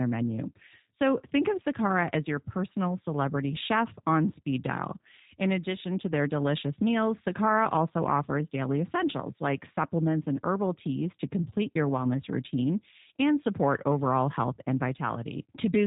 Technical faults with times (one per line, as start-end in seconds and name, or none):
0.00-15.86 G.729 codec